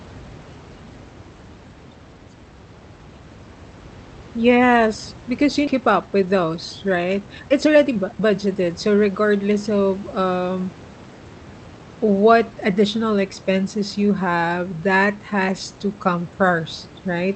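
Just after "because you", at 5.67 to 5.69 s, there is a skip ahead: about a second of audio was discarded while later audio was already queued, and playback jumps straight to it with nothing inserted in between. The two sides are spliced almost directly, so the sound lurches forward abruptly. On a spectrogram the harmonic pattern changes discontinuously at one vertical line, and the waveform shows an abrupt change in envelope with no silent stretch.

From 5.81 to 9.74 s a jitter buffer speed-up follows. The buffer still held more audio than its target, so the receiver repeatedly removed short pieces, each one or a few pitch periods long, cutting out well over half a second in total. The speech plays about 16% faster at unchanged pitch and sounds hurried. On a spectrogram the harmonics keep their spacing while syllables are visibly compressed in time. The waveform shows shortened periodic stretches, with tiny splices between cycles.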